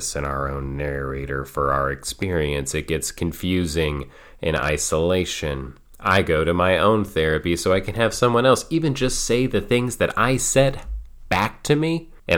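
No technical faults are audible.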